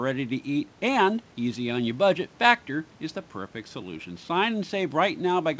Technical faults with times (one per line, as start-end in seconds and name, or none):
none